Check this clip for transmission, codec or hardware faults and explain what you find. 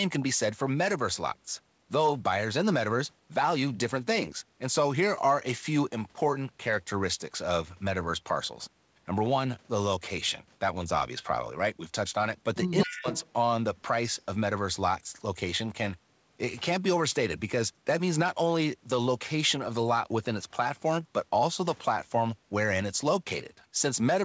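Two faults overlap in a short stretch of this speech recording, between 12.79 and 13.32 s. The audio stops at about 8 kHz throughout, which fits a wideband call codec such as G.722 and is not a fault.

Echo leak, 12.79 to 13.32 s: a delayed double of the speech trails the talker by about 220 ms, sitting roughly 10 dB below it. The likely cause is a loudspeaker on one side whose echo canceller let part of the played-back signal reach its microphone and return.

Speech suppressed in double talk, 12.85 to 13.06 s: inside that same window the talker's level plunges sharply, by as much as about 35 dB, for roughly a fifth of a second. This likely happens because the canceller, unable to tell local speech from echo, attenuated both together.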